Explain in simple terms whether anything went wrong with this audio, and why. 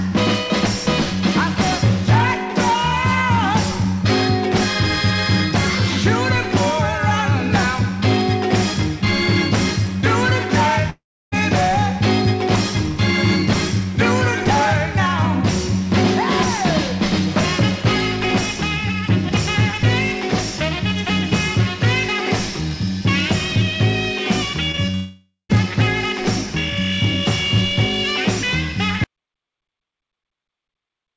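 At 10.90 to 11.34 s and again at 24.95 to 25.51 s, the sound turns into a fading buzz, then near-silence, before returning with a piece missing. This is a long network dropout, likely caused by audio failing to arrive for a stretch.

Just before the second gap, at 24.72 to 24.79 s and 24.91 to 24.95 s, there are brief smears or wobbles. This is short concealed packet loss: tiny pieces went missing and the receiver patched them by extending the previous sound.

From 29.04 s to the end, the sound cuts to total silence with no background at all. This is an audio dropout to silence, likely because the input was lost and only silence was recorded.

Throughout, the call connection also trims the sound, so nothing above 8 kHz is present.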